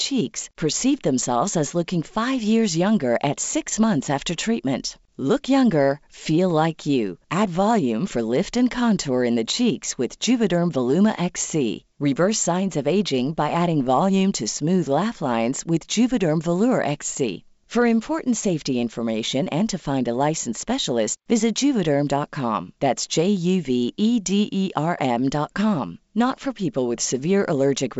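No technical faults can be heard in this speech, which carries the limited bandwidth of G.722 wideband telephone coding at 64 kbit/s, with nothing above 7.7 kHz and at most a faint trace of coding damage.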